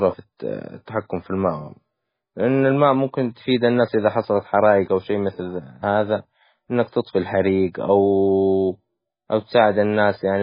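From start to finish the speech sounds watery and swirly, with metallic chirping on s sounds and smeared consonant onsets, all typical of heavy damage from likely MP3 compression at a very low bitrate, around 16 kbps. Starved of bits, the encoder cuts everything above 5 kHz and zeroes weak frequency lines that flicker on and off between frames. A spectrogram shows a hard ceiling at 5 kHz and patchy, blocky gaps below it.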